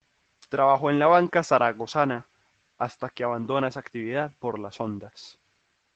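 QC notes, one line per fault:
2.13 s, lost packet rebuilt from error correction: a 20 ms stretch of the Opus stream, which fits the loss of a single packet, never arrived. The decoder filled it from the low-bitrate backup copy carried inside the next packet (in-band forward error correction), so there is no dropout. That moment of speech comes back coarser and noisier than its surroundings, a brief grainy blip. The call path's cut-off near 8 kHz is present on both sides of it.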